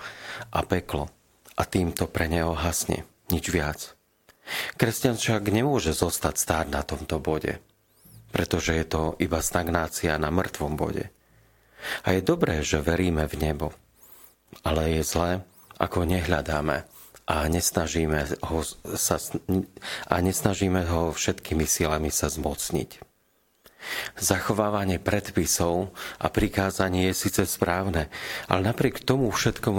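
No technical faults are audible.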